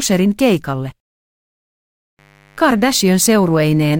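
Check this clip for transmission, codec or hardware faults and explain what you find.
One hardware fault is present: a mains buzz that enters partway through and continues to the end of the speech.

From 2.19 s until the clip ends, a mains buzz sits under the speech. Sharp switching spikes from a dimmer, rectifier or poorly shielded line repeat twice per 50 Hz cycle, so the interference carries a dense set of 50 Hz harmonics climbing into the kilohertz range. It sounds like a steady, raspy buzz, roughly 35 dB below the speech. On a spectrogram it appears as evenly spaced horizontal lines starting abruptly at 2.19 s. The waveform shows a low, regular 100 Hz spike pattern in the gaps.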